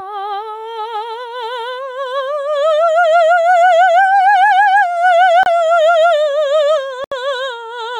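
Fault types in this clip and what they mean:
Gain pumping: The music's level keeps breathing, with the gain swinging by around 10 dB, so everything sounds squashed and flattened. This likely comes from gain set far too high, with a fast limiter clamping down.
Bluetooth stall: The music drops to silence twice, for about 29 ms at 5.43 s and about 73 ms from 7.04 to 7.12 s, then resumes. This is likely a wireless link briefly starving the headphones' buffer until delayed packets arrived.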